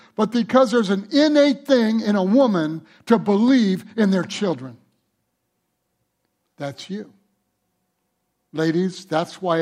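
No technical faults occur at any point in the speech.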